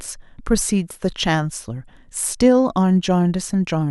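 Nothing here stands out as a technical fault; the speech runs along without any dropouts, glitches or other problems to point to.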